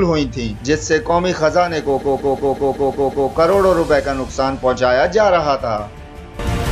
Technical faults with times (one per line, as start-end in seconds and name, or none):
1.98-3.28 repeated frames